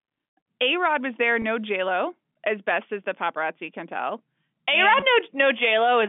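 At 1.42 to 1.44 s and 5.00 to 5.02 s, packet loss with pitch repetition bridges two 20 ms gaps, each fitting one lost packet, with a brief buzzy held tone.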